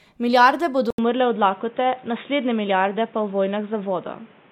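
A speech recording in which the input likely switched to a poorer device at 0.90 s. After an 80 ms silence, the sound turns dull and boxy, with nothing above 3.8 kHz, a new background noise roughly 30 dB under the speech, and little change in loudness through to the end.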